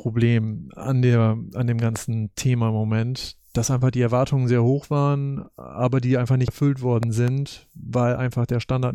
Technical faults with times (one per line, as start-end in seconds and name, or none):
1.61 corrupt FLAC frame
1.96-1.98 loud pop
5.45 corrupt FLAC frame
6.48 compressed frames skipped
7.03-7.30 loud pop